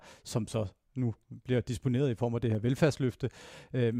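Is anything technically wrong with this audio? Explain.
Yes. At 2.55 s, just after "i form af det", there is a case of dropped samples. The likely cause is that a tiny stretch of the stream, a fraction of a millisecond, was skipped somewhere along the signal path, so the waveform leaps straight from one value to a later one with nothing in between. The gap is too brief to remove any audible speech, but the sudden step is heard as one sharp click, seen as a thin vertical line across the spectrum.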